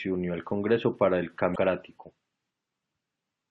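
Damaged data in a compressed stream appears from 1.53 to 1.57 s, a 40 ms glitch in the speech. Some of the compressed bytes at that point are corrupted, so the decoder cannot interpret the affected frames correctly. It loses its place in the stream and has to hunt for the next valid frame header before normal decoding resumes. The result is a short, harsh chirp or blip cutting across the speech.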